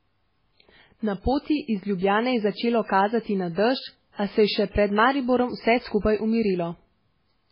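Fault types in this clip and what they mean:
MP3 compression: The speech sounds watery and swirly, with nothing above about 5.3 kHz. This is likely heavy low-bitrate encoding, around 16 kbps.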